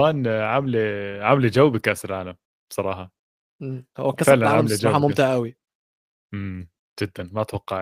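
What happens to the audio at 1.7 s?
Nothing goes wrong at 1.7 s; the speech is intact at that moment.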